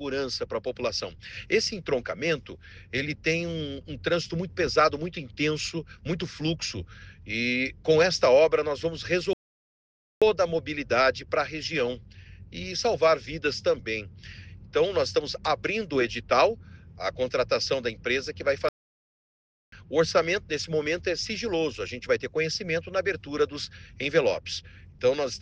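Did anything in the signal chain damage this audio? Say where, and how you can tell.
Yes, at playback: there's a playback stall where the audio drops to silence from 9.33 to 10.22 s (about 0.88 s) and again from 18.69 to 19.72 s (about 1.04 s). The likely cause is the player running dry or its thread getting blocked, then resuming.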